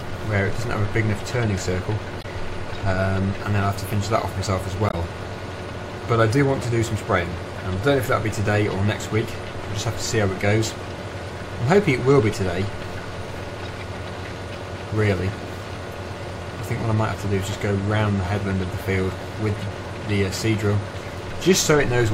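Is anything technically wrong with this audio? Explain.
Yes. Two brief glitches, at 2.20–2.25 s and 4.89–4.94 s, are damaged data in a compressed stream: the decoder misreads corrupted frames and loses sync until it finds the next valid header.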